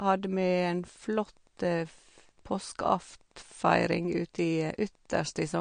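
Throughout the speech, Wi-Fi interference adds faint ticking about 40 dB below the signal, repeating every 102.4 ms. That steady beacon rhythm sets it apart from random crackle. The treble stops sharply at 9.5 kHz, and the speech sounds watery and swirly, most likely from MP3 compression at a low bitrate, around 48 kbps.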